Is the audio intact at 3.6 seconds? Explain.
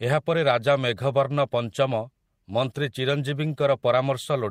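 Yes, at 3.6 seconds the speech runs through intact, with no dropout, click, distortion or other fault at that moment.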